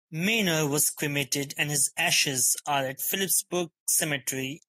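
Nothing in this speech recording stands out as a technical fault, so there's no problem here to point to.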